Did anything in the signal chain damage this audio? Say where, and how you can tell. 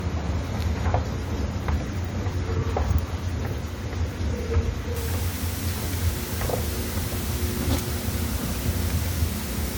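Yes. Throughout, there's swirly, hollow smearing with blurred attacks, likely generation loss in the codec stage: AAC at 96 kbit/s re-encoded a few times, stacking artefacts.

From 4.96 s to the end, a steady, even hiss sits only around 10 dB under the sound. That's low bit depth with dither from a sample-format conversion, consistent with roughly 5 bits.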